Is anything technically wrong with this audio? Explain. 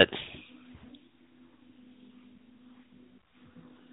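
No, nothing technically wrong can be heard here.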